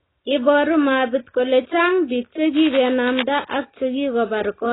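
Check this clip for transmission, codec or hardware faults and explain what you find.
Two faults are audible, one running the whole length of the speech and one brief burst.

Throughout, the speech sounds dull and smeared, with a warbly, fizzy texture and nothing above 3.9 kHz. This is likely heavy AAC compression, which fits AAC-LC at a very low bitrate around 16 kbps.

From 2.56 to 3.24 s, just after "biik che", a rough scratching rustle sits roughly 10 dB below the speech. This is cable scratch noise, likely from a worn contact whose resistance flickered as it moved.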